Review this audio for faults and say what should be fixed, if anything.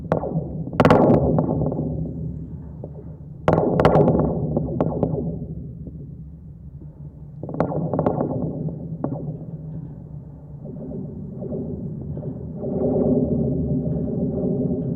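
Hard clipping: some stage in the chain was driven past its maximum level, so peaks were sliced flat, adding high harmonics. The worst is from 0.80 to 1.39 s and from 3.48 to 4.08 s, about 12 dB over, giving harsh fuzz. From 4.81 to 5.03 s it is about 2 dB over, crackle on peaks. Brief crackles occur at 0.12 s and 7.61 s (about 4 dB) and 8.07 s (about 1 dB). Lower the gain ahead of the overloaded stage, or add a limiter, so peaks stay below full scale.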